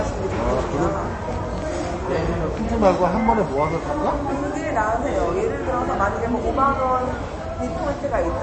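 From start to finish the audio carries what is likely MP3 compression. Nothing is present above about 8.3 kHz, so the treble stops at a hard ceiling, and the plainly audible damage, a watery, swirly texture as weak frequency components flicker in and out between frames, fits a low bitrate around 32 kbps. That flickering sets it apart from a plain low-pass filter, which would dull the top end but leave the remaining sound steady and clean.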